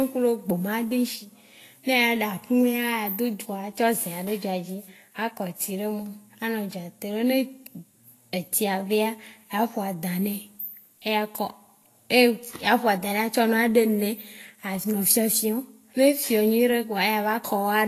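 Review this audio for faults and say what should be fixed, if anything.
Throughout the whole recording the speech has a hissy, grainy quality. Tones turn rough, consonant attacks lose their crispness, and nothing is heard above 14.2 kHz. This is plainly audible Vorbis compression, likely from encoding at a low setting, which fits a bitrate of around 34 kbps. The encoder cut the top of the spectrum and quantised the remaining treble so coarsely that fine detail was replaced by noise of similar energy. To prevent it, keep an uncompressed or high-bitrate master and encode from that at a substantially higher Vorbis quality.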